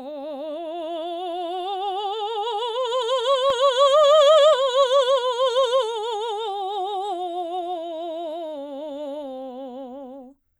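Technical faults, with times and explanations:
2.53–10.59 s, block size mismatch (truncated): the end of each block is discarded, so the music breaks into a 43.1 Hz buzz, which fits 1024-sample blocks. Tempo and pitch hold steady. The spectrogram shows regular vertical striations, and the waveform shows a step every 23 ms.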